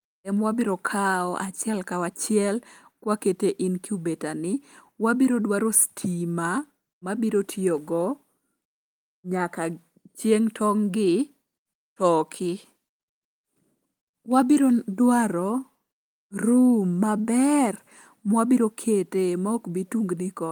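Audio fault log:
Nothing stood out on listening to this speech recording.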